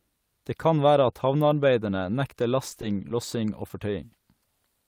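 Scattered short gaps run from 2.69 to 3.83 s, just after "være at havnearbeiderne nekter". Around five packets went missing or arrived late, each leaving a hole of about 20 ms at most. The receiver covered each hole by extending the preceding sound, which leaves brief ticks and smeared hiccups.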